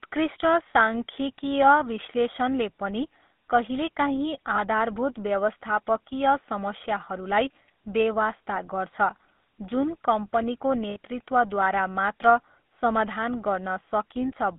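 From start to finish, the speech passes through a GSM full-rate codec, and the damage is plainly audible. The coder represents the voice as a vocal-tract filter fed by sparse, evenly spaced excitation pulses, which gives it a buzzy, gravelly roughness. The band is limited to roughly 200 Hz to 3.7 kHz, which fits a 13 kbps full-rate coder. A spectrogram shows a hard ceiling near 3.7 kHz and harmonics that are smeared and grainy rather than cleanly striated.

There are lost GSM frames at two points. From 4.56 to 4.59 s, a gap of about 20 ms, consistent with one frame, is filled by repeating the last good frame, which gives a short metallic ring. From 10.90 to 10.97 s, just after "जुन कम्पनीको", a longer gap of about 60 ms, pointing to three frames, rings. On the waveform these appear as brief stretches of repetitive cycles. On the spectrogram they look like frozen horizontal bands.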